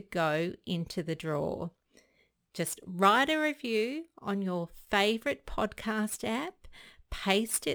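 A gritty, inharmonic fizz rides along with the speech throughout, strongest on loud and bright sounds and sitting roughly 20 dB below them. This is crude rate conversion, fitting a 44.1 kHz to 48 kHz change made by repeating nearest samples without filtering.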